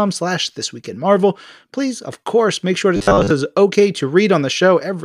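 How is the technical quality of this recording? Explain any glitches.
One glitch stands out, between 2.96 and 3.30 s, after "course make sure to" and before "it's okay": robotic sound from repeated short buffers. The audio turns into a rigid metallic buzz near 100 Hz, which fits a 10 ms stretch being replayed for most of that span, likely because new audio arrived too slowly. Unlike a stutter, nothing audibly jumps back; the sound follows the original only roughly under the fixed pitch.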